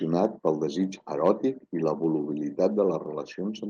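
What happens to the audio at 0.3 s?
Microphone overload occurs from 0.25 to 0.48 s, before "pel desig". The loudest peaks run about 1 dB past the converter's ceiling, likely from input gain set too high, so their tops are sheared flat, giving a harsh crackle on a small fraction of samples.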